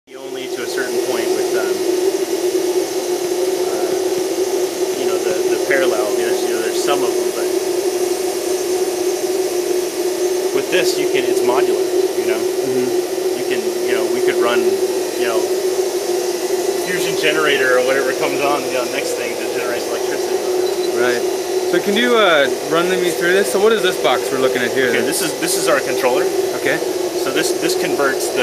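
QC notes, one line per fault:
No faults found on this pass; nothing to log.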